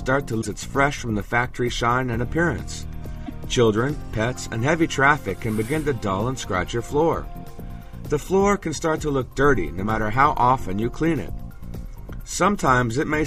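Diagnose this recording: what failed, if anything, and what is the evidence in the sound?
Codec stage: damaged data in a compressed stream. Brief glitches at 0.41–0.46 s and 3.23–3.31 s. Corrupt frames were misdecoded while the decoder resynchronised.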